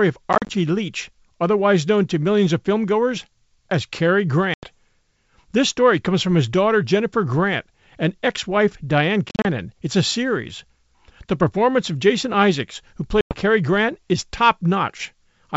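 A speech clip over a G.722 wideband call, heard as clean wideband telephone sound, with packet loss on an ADPCM call at 0.33–0.53, 4.54–4.67, 9.29–9.46 and 13.21–13.39 s. About 90–110 ms goes missing each time, in holes of up to 40 ms scattered over 160 ms at the first and third. Unlike plain dropouts, the sound returns slightly distorted while the decoder's predictor resynchronises.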